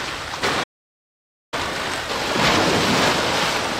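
Right at 0.42 s there's a short chirpy blip, and it comes back at 3.56 s. That's damaged data in a compressed stream. A patch of the encoded bytes got mangled, so the decoder couldn't make sense of the frame there, lost its footing and hunted for the next clean frame header. Each one is a quick squawk, just under a couple of hundredths of a second.

Then at 0.63 s the sound just stops dead in the middle of things and stays silent until 1.54 s, so roughly 0.89 s of nothing. That gap is a playback stall, most likely the player running dry of buffered data or having its audio thread held up, so the output had nothing to hand over until it got going again.

From 1.54 s to 2.42 s it's in a hurry. That's time-compressed catch-up: having fallen behind during the stall, the player trims its backlog by cutting out little slices and cross-fading across the joins, playing at about twice normal speed. 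The pitch stays where it should be, but you can hear it rushing until it drops back to normal pace around 2.42 s.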